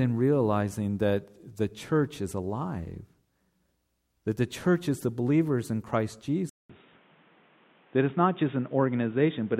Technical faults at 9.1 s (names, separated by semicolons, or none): input switched to a poorer device